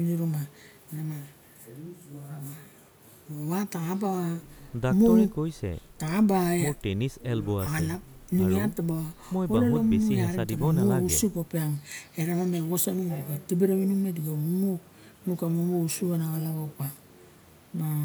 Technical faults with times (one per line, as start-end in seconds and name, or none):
none